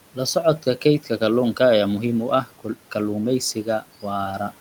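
Between 0.84 and 1.21 s, before "kalluunka ayaa muhiim u", speech cut by the noise suppressor swallows faint sounds by about 9 dB. Unlike a dropout, the audio never goes silent.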